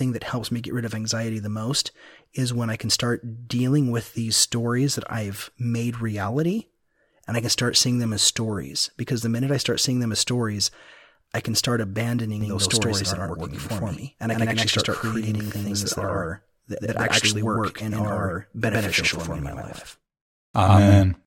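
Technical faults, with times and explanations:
12.41 s to the end, doubled audio track: from this point the speech is heard twice. A second full-band copy trails about a tenth of a second behind, at roughly equal level. It starts abruptly and has no decay or room colour. An edit that holds two out-of-step copies is the likely cause.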